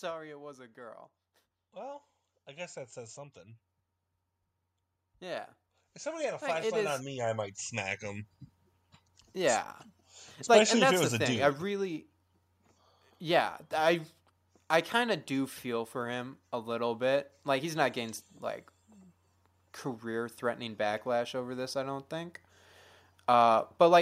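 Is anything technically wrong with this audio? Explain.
Yes. From 0.74 to 3.47 s and again from 5.2 to 9.63 s, speech and background swell together, by about 5 dB then about 11 dB: automatic gain rising, as the gain control lifts a quiet input.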